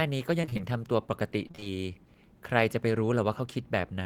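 From 0.41 to 0.61 s, and again from 1.47 to 1.68 s, the speech breaks up with repeated packet loss (robotic sound). Short holes, the longest about 25 ms, keep recurring. Each is patched by stretching the previous sound. About half of each stretch is filler, so it turns choppy, with pieces missing.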